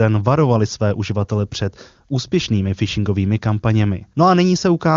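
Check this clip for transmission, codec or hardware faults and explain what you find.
I find no transmission, codec or hardware faults in this clip.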